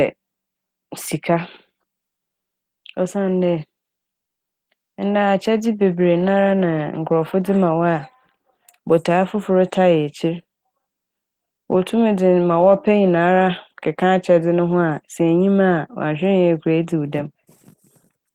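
Speech recording, with no audible technical faults anywhere in the clip.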